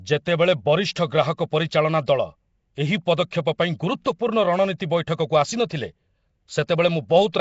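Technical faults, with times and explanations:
Throughout, Nellymoser compression: a rough, hissy, underwater smear, likely Flash's Asao codec at about 32 kbps; the spectrogram shows nothing above 7.7 kHz.
3.31, 4.04, 4.78 and 6.67 s, pre-echo: 11 to 16 ms of block-spread codec noise hisses before each sharp attack, seen as smear preceding the waveform onset.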